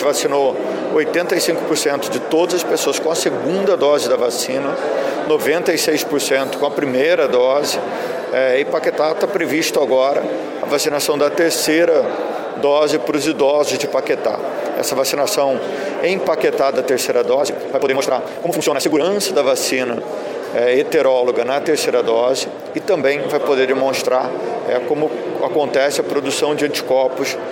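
From 17.30 to 19.04 s there is a time-stretched section: the sound suddenly runs at about 1.93 times its surrounding pace while its pitch stays put, likely from software squeezing that stretch to fit a shorter slot by discarding small slices and splicing the rest together. It comes across as rushed. On a spectrogram the harmonics keep their height but events bunch tightly in time, and the waveform shows compressed envelopes with splice seams.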